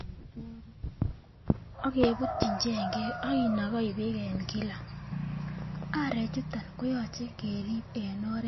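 Throughout, the speech has nothing above 5.8 kHz and plainly sounds watery and swirly, likely from MP3 compression at a low bitrate around 26 kbps.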